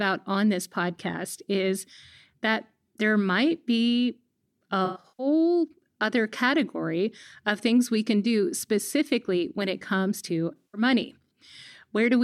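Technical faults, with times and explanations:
4.85–5.27 s: AAC frame loss with concealment. About 0.26 s is lost in scattered bursts of up to around a tenth of a second. The decoder reuses the last good spectrum, so the sound smears and turns phasey instead of going silent.
10.56–10.81 s: AAC frame loss with concealment. About 0.17 s is patched from the preceding spectrum. It is heard as a noisy smear rather than the clean gap of a plain dropout.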